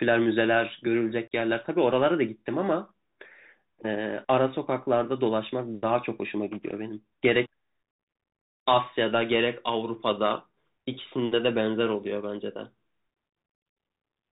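A speech recording that sounds narrow and boxed-in from start to finish, with nothing reaching above about 4 kHz, a fine granular hiss sitting under the talking, s sounds coming out scratchy, and loud bright moments turning harsh and distorted. That is the Bluetooth CVSD headset codec at work, with plainly audible damage. CVSD codes each sample as a single up-or-down bit with a step size that adapts, and fast loud changes outrun that step, consistent with a 64 kbit/s headset link. Near the start, from about 1.28 to 1.33 s, the sound drops out in a short hole with abrupt edges, and it returns briefly quieter before recovering. This is unconcealed Bluetooth headset packet loss. About 37.5 ms of audio went missing, roughly five short voice packets between headset and phone, and silence or an idle pattern filled the gap with no attempt to cover it.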